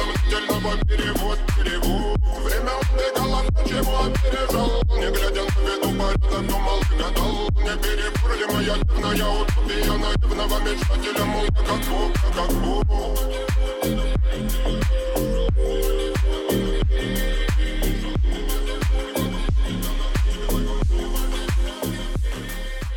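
No technical faults can be heard at any point; the signal holds steady and continuous throughout.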